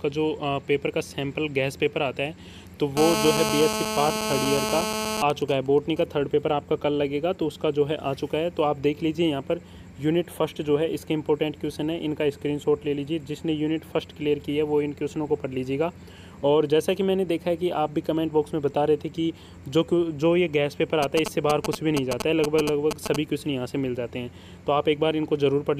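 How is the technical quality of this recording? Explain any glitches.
The recording is marred by interference from a nearby 2G mobile phone, in three episodes.

From 2.97 to 5.22 s there is GSM phone buzz while the phone is in a call. The handset transmits radio bursts about 217 times a second, and the audio circuitry rectifies each pulse into a click. The result is a hard, raspy buzz at about 217 Hz, roughly 2 dB below the wanted sound, so almost as loud. On a spectrogram it appears as a dense ladder of evenly spaced harmonic lines stacked up from 217 Hz. The waveform shows a regular comb of sharp spikes.

GSM signalling bursts follow at 5.30 to 6.03 s, when the phone's user falls silent during the call, and return at 21.03 to 23.16 s while the phone exchanges signalling traffic with the network. The radio now transmits only in short clusters, so the rectified pulses come as even ticks with a longer buzz twice a second during the silent call, and as a galloping dit-dit-dit of brief 217 Hz buzzes during the signalling. 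The first episode sits well below the sound, about 15 dB down. The second is about as loud as it. A spectrogram shows broken vertical blocks of the same harmonic ladder, and the waveform shows separated groups of spikes.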